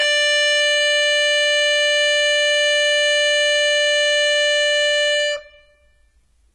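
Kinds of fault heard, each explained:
Transcoding between lossy codecs, throughout: the music likely passed through several low-bitrate lossy codecs in turn, the last sounding like Vorbis. Each pass re-encoded the earlier artefacts and added its own, so different artefacts are heard together, and nothing survives above 12.7 kHz.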